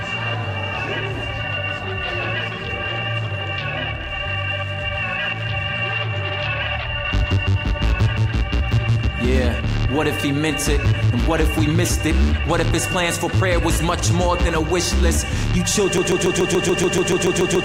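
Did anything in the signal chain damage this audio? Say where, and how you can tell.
Yes. A broken-record loop from 15.98 s to the end: a 0.14 s fragment repeats identically 12 times, likely a stalled buffer resending its last block. Unlike stutter or dropouts, there are no gaps, only exact repeats.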